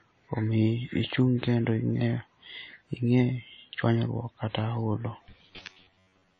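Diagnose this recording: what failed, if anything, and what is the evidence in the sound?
The codec stage is the likely source of the damage: the speech has been through WMA compression, and the damage is plainly audible across the whole clip. Nothing survives above about 10.1 kHz, so the top of the spectrum is cut off. The transform coder has discarded weak spectral lines and smeared its quantisation noise over long blocks, leaving a ringing, washy texture with hiss that rises and falls with the speech. This fits a low bitrate of around 32 kbps.

From 5.29 s to 6.39 s the driver or buffer stage stops delivering fresh audio in time, likely because of buffer underruns. The software fills the gaps by replaying short stretches it already has, so about half of that passage is repeated material while the real audio in between is skipped. The result is robotic sound from repeated short buffers: a rigid, metallic buzz at 93.8 Hz. 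That rate fits a buffer length of roughly 10.7 ms.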